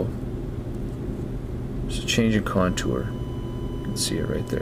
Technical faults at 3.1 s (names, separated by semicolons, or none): USB whine